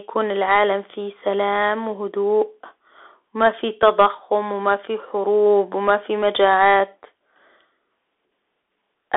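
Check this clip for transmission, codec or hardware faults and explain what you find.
One fault runs through the whole clip: the speech passed through a Bluetooth CVSD headset codec. Its one-bit up-or-down coding, consistent with a 64 kbps link, can't follow loud high sounds, so s sounds turn scratchy over a granular hiss. The band sits between 250 Hz and 3.5 kHz, with nothing above 3.8 kHz.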